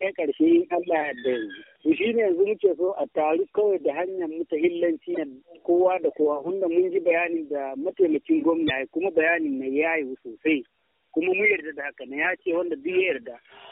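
At 5.14–5.18 s and again at 8.66–8.71 s, damaged data in the compressed stream makes the decoder misread its frames and lose sync, giving two brief blips of about 40 ms. Each appears as a thin broadband vertical smear on a spectrogram and a jagged discontinuity in the waveform.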